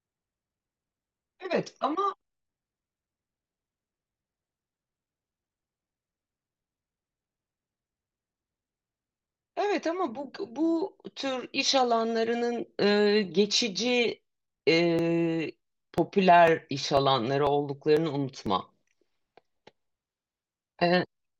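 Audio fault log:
14.49 to 19.46 s, periodic USB or driver dropouts: About ten short gaps fall evenly every 0.496 s, roughly twice a second. Each one loses a few milliseconds of audio. Nothing fills the gap. The speech simply jumps ahead. Something in the system is stalling the USB bus or the audio driver on a fixed schedule. Each abrupt jump leaves a small step in the waveform. That step is heard as a regular tick running under the speech.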